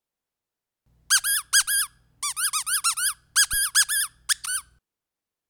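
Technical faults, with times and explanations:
3.53–3.60 s, phantom power thump: a supply was switched on or off on a live input, and the abrupt voltage step passed through the coupling capacitors into the signal path, producing a deep, low-frequency thump peaking at about -24 dBFS and decaying within 16 ms.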